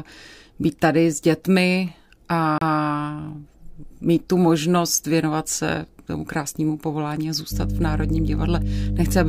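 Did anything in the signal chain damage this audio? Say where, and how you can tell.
Yes. At 2.6 s the speech has a CD skip, damage from the playback stage. There is a brief tick and roughly 30 ms of silence, then the sound resumes from a different point on the disc. A knock or surface flaw threw the laser onto another turn of the spiral, so the player muted briefly and picked up elsewhere. The result is an abrupt discontinuity in the speech rather than a dropout followed by a clean continuation.

From 7.50 s to the end, mains hum enters through the analogue wiring. A steady 50 Hz tone with low harmonics sits at roughly the same level as the speech, so it is plainly audible under and between the spoken passages. This points to a ground loop or a transformer nearby coupling the power line into the signal path. Its sudden onset partway through suggests a connection or piece of equipment changed at that moment.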